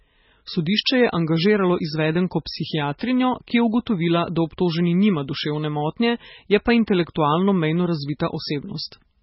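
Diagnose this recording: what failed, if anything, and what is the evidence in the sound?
The speech is lowpassed throughout the whole clip, with nothing above 5.6 kHz, and carries heavy watery, swirling artefacts, pointing to the codec stage, likely MP3 compression at a very low bitrate, which fits about 16 kbps. Starved of bits, the encoder discards the treble at a fixed cut-off and zeroes weak frequency lines that flicker between frames. A spectrogram would show a hard ceiling at 5.6 kHz and speckled, patchy gaps in the energy below it.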